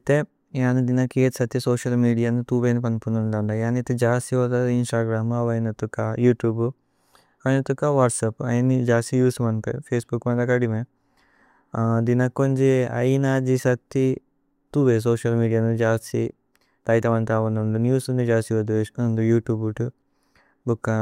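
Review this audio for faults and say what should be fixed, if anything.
Nothing to fix: no faults are audible anywhere in the speech.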